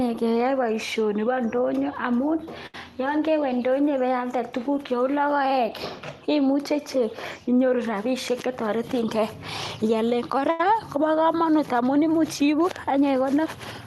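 At 2.66 to 2.75 s, between "boishoni boo indonyo amun" and "yoon kewee indonyo ibealde", a short stall from a late packet occurs. The buffer ran dry. About 74 ms of sound is stretched and held, with a slight buzz or dip.

From 8.31 to 9.43 s, a jitter buffer speed-up plays the speech at 106% speed. Small pitch-period slices, roughly 70 ms in total, are cut. The speech sounds hurried but keeps its pitch.

At 10.51 to 10.60 s, a second late-packet stall holds the sound for 88 ms, then resumes.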